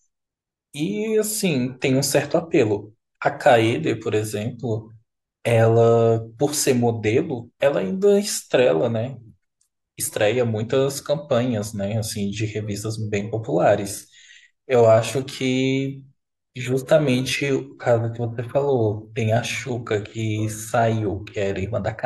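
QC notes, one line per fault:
13.75–21.55 s, time-stretched section: the speech abruptly slows to about 0.74 times its pace while pitch holds steady, so syllables sound drawn out until the section ends. This is likely stretching software padding the audio to fit a length by repeating short slices. On a spectrogram the harmonics keep their spacing but stretch horizontally with blurred onsets. The waveform shows elongated syllable envelopes with softened, duplicated-looking transients.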